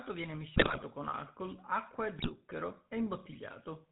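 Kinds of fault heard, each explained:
GSM full-rate codec: The speech carries a buzzy, gravelly roughness from start to finish, plainly audible, with nothing above 4 kHz. The coder models the vocal tract and excites it with regular pulses, keeping one excitation sample in three, which fits 13 kbps full rate.
GSM bit errors: Squawks, pops and gargling break up the speech from 0.56 to 0.83 s and again from 2.19 to 2.3 s. Flipped bits reached the decoder and corrupted its filter, pitch or gain values, warping the spectrum or level frame by frame.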